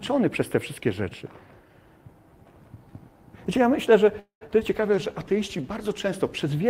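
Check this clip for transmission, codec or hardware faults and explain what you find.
Five faults cluster in the second half of the clip, all between 4.19 s and 6.18 s: a call audio freeze, two short concealed packet losses, a call bitrate drop, and a jitter buffer slow-down overlapping the bitrate drop.

From 4.19 to 4.43 s there is a call audio freeze. The last sound is carried on as a fading buzz for about 0.1 s, then drops to silence for about 0.11 s. The likely cause is delayed packets emptying the jitter buffer. On a spectrogram, a smeared, flat continuation fades into a blank strip.

At 4.47 to 4.50 s and again at 4.60 to 4.63 s, short concealed packet losses each drop about 40 ms of audio. The receiver bridges each hole with a brief synthetic continuation while shedding roughly 30 ms of built-up delay. Each one is audible as a quick smear or wobble, and shows as a short stretch of synthetic continuation blended into the waveform.

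From 4.77 to 6.18 s a call bitrate drop takes the encoder from 32 to 17 kbps, holding the lowest rate for 1.28 s. Coarser coding makes the sound rougher and more watery. The upper spectrum turns patchy and blotchy until the bitrate recovers.

Between 4.95 and 5.62 s a jitter buffer slow-down adds 70 ms by repeating single pitch periods or bits of pauses. Playback runs at 91% speed without any change of pitch, so sounds are slightly drawn out and may warble. The waveform shows repeated identical cycles, and spectrogram features look horizontally stretched.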